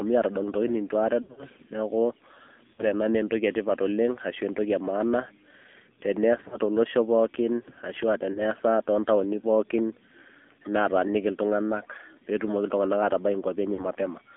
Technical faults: AMR narrowband mobile codec; lost AMR speech frames

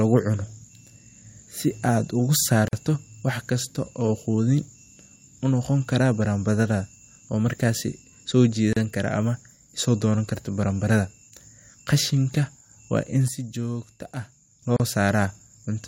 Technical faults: gap at a join of encoded pieces; sudden gain jump

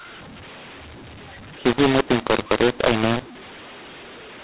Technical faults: mu-law and A-law mixed up

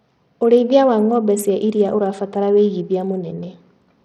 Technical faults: Bluetooth SBC compression

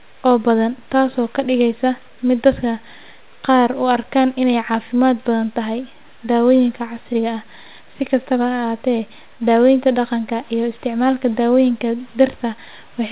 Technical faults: none

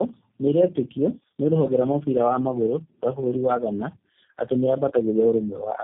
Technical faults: tandem speech coding

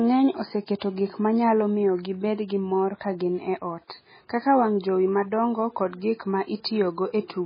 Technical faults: MP3 compression

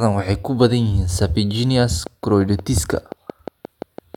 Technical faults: train of clicks

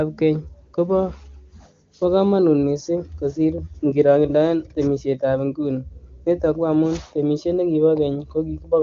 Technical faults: none

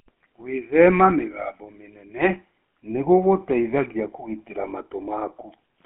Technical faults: GSM full-rate codec

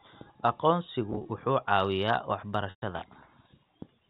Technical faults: packet loss with pitch repetition

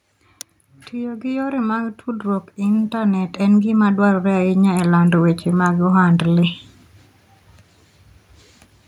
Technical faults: automatic gain rising

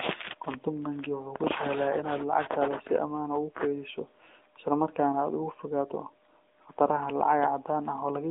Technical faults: AMR narrowband mobile codec

